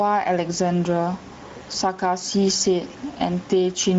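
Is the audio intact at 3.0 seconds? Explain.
No. At 3.0 s, as across the whole clip, the speech shows gain pumping. Level swings of around 10 dB point to gain set too high for the microphone, with a fast limiter likely pulling it down on each loud syllable. The room noise sits about 34 dB below the speech. On a waveform the envelope looks flattened and squashed.

The Speex codec damage is also plainly audible here. This low-bitrate CELP coding, which fits a setting near 16.8 kbps, has too few bits for the excitation signal, so the speech sounds hoarse and noisy. On a spectrogram the harmonics look smeared and grainy, and any band above 4 kHz appears as a diffuse, noise-like wash rather than clear structure.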